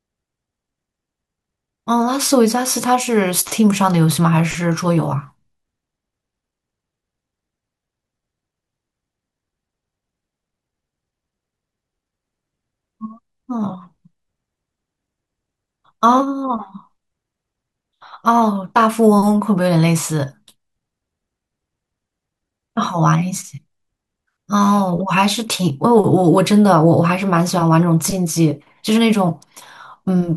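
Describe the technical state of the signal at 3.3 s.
At 3.3 s the signal is intact, with no audible fault at that moment.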